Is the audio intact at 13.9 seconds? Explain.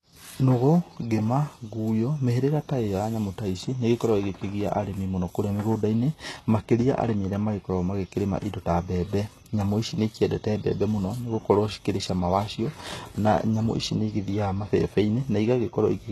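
No. At 13.9 seconds the speech carries the same damage heard across the whole clip. Nothing sits above about 12.3 kHz. The treble that remains sounds synthetic, and s sounds come out gritty and lispy. The likely cause is HE-AAC compression at a very low bitrate, which fits roughly 16 kbps. That codec keeps only the lower spectrum. It fakes the top by copying lower bands upward, so the harmonics there don't match the real ones.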